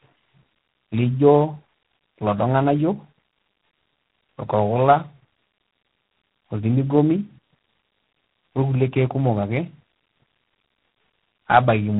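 Tandem speech coding runs throughout: the speech sounds rough, muffled and warbly, with nothing above 3.8 kHz. This fits two low-rate speech codecs in a row, such as G.729A then G.726, the second re-encoding the first's degraded output, so their distortions compound.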